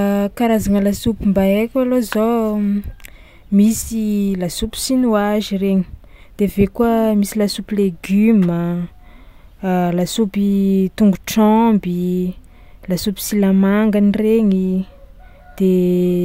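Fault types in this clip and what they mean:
No technical faults can be heard anywhere in the recording. There is nothing in the speech to list under any fault type.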